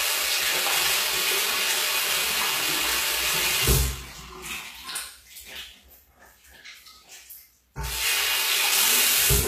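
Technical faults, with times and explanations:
Throughout, HE-AAC compression: the sound is likely coded this way, with obvious damage and nothing above 14.9 kHz. Only the lower spectrum is truly coded. The treble is rebuilt by copying lower bands upward and fitting them to a coarse envelope. So the top keeps its brightness but loses its real detail. The copied content doesn't match the original across the crossover, giving a gritty, synthetic top end, which fits a bitrate around 20 kbps.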